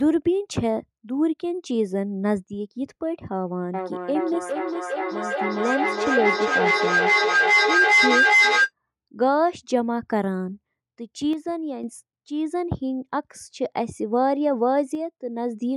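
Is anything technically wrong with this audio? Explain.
Yes, there are two kinds of fault.

From 3.74 to 8.72 s there is feedback echo between two devices. Each phrase comes back roughly every 0.4 s, and the repeats build up to about 5 dB above the speech instead of fading. A second device nearby plays the call audio into a microphone, and its echo canceller can't remove sound it didn't play itself. That steady spacing and build-up, with each pass thinner and more ringing, separates it from room reverberation, which decays smoothly.

From 11.33 to 11.84 s and from 14.95 to 15.18 s the level drops abruptly by about 6 dB, then snaps back. This is one channel dropping out, likely a stereo channel lost before the mono sum, which halves what both sides shared. Any sound present only in that channel vanishes. A gain ride or fade would glide. This drop is instant and lands on exactly 6 dB.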